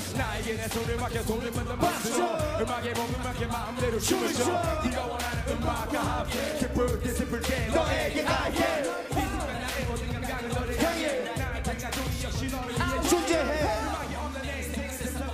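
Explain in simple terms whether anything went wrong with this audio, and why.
Nothing went wrong that I could hear; listening carefully, no glitch, dropout or distortion stood out anywhere in the recording.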